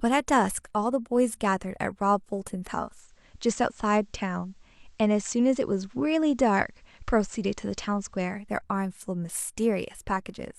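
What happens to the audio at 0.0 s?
Nothing goes wrong at 0.0 s; the speech starts cleanly there, with no audible fault.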